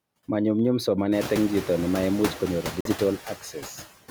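A noise suppressor runs across the whole speech clip, estimating the steady background in each frequency band and pulling those bands down frame by frame, by about 16 dB. From around one second in, the room noise in the recording rises by about 21 dB and then sits about 13 dB below the speech. That gives the suppressor more to remove, and its artifacts follow: the background dips away in the gaps between phrases and swells back up under the talking.

From 2.81 to 2.89 s there is a Bluetooth dropout, most likely caused by audio packets failing to reach the headphones in time and being discarded, which fits the loss of a few frames. The output falls silent for roughly 80 ms. When the sound returns, it picks up further along rather than where it stopped, so that stretch of speech is missing instead of delayed.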